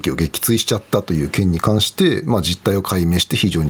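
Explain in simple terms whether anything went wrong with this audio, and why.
Something did go wrong, and it lasts for the whole recording: gain pumping. The level keeps getting pulled down each time someone speaks and then coming back up in the pauses. Quiet and loud moments end up closer in level, which gives the speech a squashed, flattened quality. The likely cause is a recording level set far too high, with an automatic level control clamping down on every loud sound and then letting go in the gaps. What sets this apart from a noise gate is that the level is turned down rather than cut to silence. It comes back up in the pauses instead of disappearing, and the swing between those two states is large.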